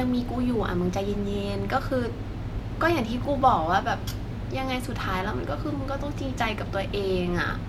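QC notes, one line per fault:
No dropouts, clicks, distortion or level problems are audible anywhere in the speech.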